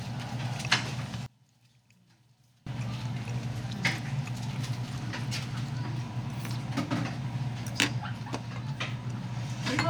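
One channel inverted, from 1.26 to 2.67 s: the sound abruptly falls by about 28 dB to a faint remnant, then returns at full level. The likely cause is one stereo channel with reversed polarity, so everything common to both cancels when summed to mono.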